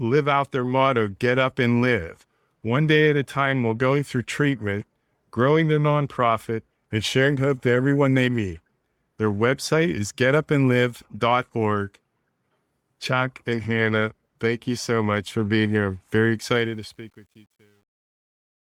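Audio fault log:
16.55–18.62 s, truncation distortion on a fade: During the fade-out, which begins around 16.5 s, the tail turns gritty instead of decaying cleanly. The level is being reduced at a resolution that fits about 10 bits, with no dither. As the signal shrinks toward the smallest step, the waveform collapses into coarse square steps. From 17.1 s to the end the distortion is at its worst.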